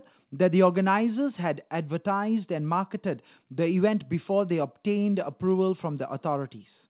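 Nothing goes wrong at any point in this speech; it simply comes over a call link, with the top end stopping at 4 kHz, as you'd expect from a G.711 mu-law connection.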